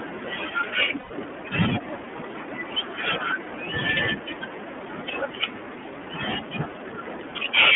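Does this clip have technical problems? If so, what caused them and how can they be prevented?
Yes. The iLBC codec affects the whole clip. The audio is confined to roughly 200 Hz to 3.4 kHz, so nothing bright survives. The excitation is coded frame by frame without reference to earlier frames, which leaves the speech plainly rough and somewhat synthetic. The band and texture fit iLBC's 30 ms frame mode at 13.33 kbps. To prevent this, use a wideband codec such as Opus at a moderate bitrate where the network allows.

Lost iLBC frames occur from 0.99 to 1.12 s, a gap of about 120 ms, which fits four 30 ms frames going missing in transit. The decoder fills the hole by repeating the last pitch period blended with noise and fading it, so the gap comes through as a held, slightly buzzy vowel. Because each frame decodes independently, clean speech resumes right after. A jitter buffer with forward error correction or redundant packets would reduce such losses.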